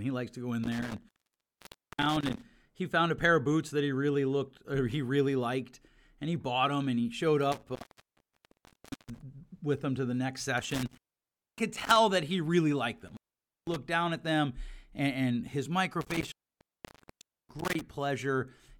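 The speech has an intermittent contact, a loose connection briefly opening, five times: 0.64–2.44 s, 7.52–9.22 s, 10.58–11.96 s, 13.08–13.76 s and 16.01–17.81 s. Each one crackles at the edges and drops to faint hiss for about 0.5 to 1.3 s.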